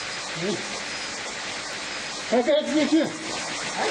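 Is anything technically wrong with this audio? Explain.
Yes. There are two bit error spikes, at 1.73 s and 3.04 s. Each is a single flipped bit that throws one or two sample values off by a power of two before they snap straight back, peaking at about -27 dBFS. The result is a brief, broadband tick that has nothing to do with the surrounding sound. Unlike a dropout or edit click, it leaves no gap and no step in the waveform, just an isolated spike.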